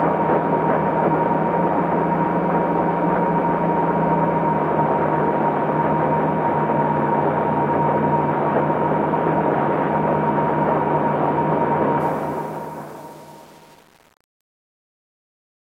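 Truncation distortion on a fade runs from 12.00 s to the end at 15.80 s in this recording of everyday sound, worst from about 12.12 s onward. The fade-out begins around 12 s, and the gain stage rounds each sample to a coarse grid with no dither. As the level sinks, the waveform collapses into a few square steps, so the tail turns gritty. This fits a path holding only 7 bits.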